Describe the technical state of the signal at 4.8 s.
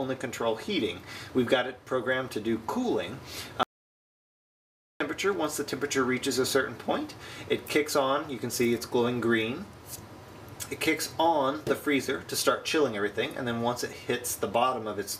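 At 4.8 s the signal is inside an audio dropout to silence running from 3.63 s to 5.00 s, about 1.37 s of nothing. The input was likely lost, through a disconnect or a failed link, while recording carried on writing silence. The sound stops abruptly and returns mid-flow, with no room tone in between. On a waveform this is a flat line; on a spectrogram, a dark vertical band with hard edges.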